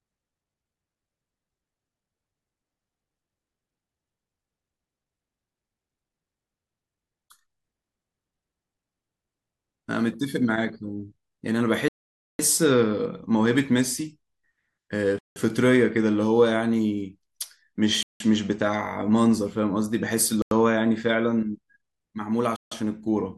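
A likely Bluetooth stall, where held-up packets let the headphones' buffer run empty, pauses playback five times. The speech drops to dead silence at 11.88 to 12.39 s (about half a second, the longest gap), then at 15.19 to 15.36 s, 18.03 to 18.20 s, 20.42 to 20.51 s and 22.56 to 22.72 s, gaps of roughly 0.09 to 0.18 s. Each time the audio cuts out cleanly and resumes abruptly.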